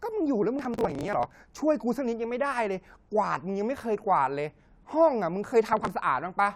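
From 0.59 to 1.35 s, processor overload crackle tears through the speech. Many short buffers, around 10 ms each, miss their deadline and are skipped, leaving hard-edged gaps. It sounds like gritty crackle. A shorter burst returns from 5.73 to 5.87 s.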